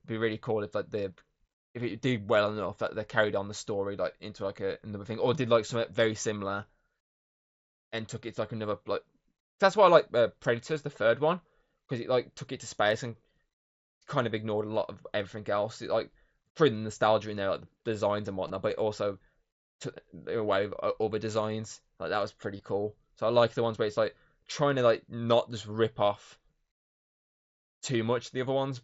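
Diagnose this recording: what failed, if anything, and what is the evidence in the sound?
Concealed Bluetooth headset packet loss, a failure on the wireless link. At 18.48 to 18.50 s, after "there like designs and", and at 22.57 to 22.60 s, after "that was", about 22.5 ms went missing. That fits three lost mSBC frames. The receiver repeated recent waveform, leaving a brief buzz.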